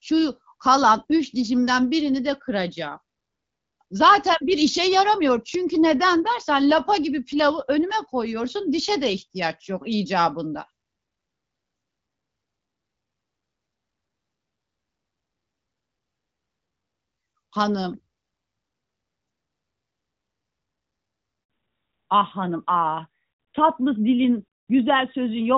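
At 21.44 s a handover gap opens: the call is passed from one network to another and no speech frames arrive during the switch. The speech dies away and stays silent for about 60 ms, until 21.50 s, and whatever was said in that instant is simply lost.

Straight after, from 21.50 s to the end, the call falls back to narrowband. The link drops from the HD Voice wideband codec, whose light coding damage earlier fits its 12.65 kbit/s mode, to a narrowband one, likely AMR-NB at 12.2 kbit/s. Nothing above 4 kHz survives, so the speech turns duller and more muffled.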